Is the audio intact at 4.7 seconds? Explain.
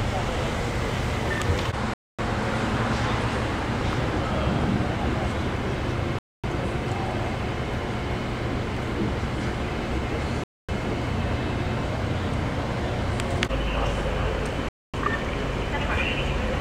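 Yes, at 4.7 seconds the audio plays through intact, with no dropout, click, distortion or other fault at that point.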